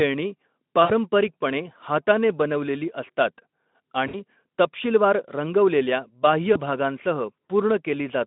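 VoIP packet loss concealed by the speech codec breaks the speech at 0.83–0.91 s, 4.07–4.16 s and 6.54–6.57 s. Each time, the decoder filled missing audio by extending its last pitch and filter with falling gain, so the sound smears into a fading buzzy tone or coloured noise before recovering. The first two gaps sound about 60 ms long, consistent with three lost 20 ms frames, and the last about 20 ms, one frame, on an otherwise narrowband Speex line.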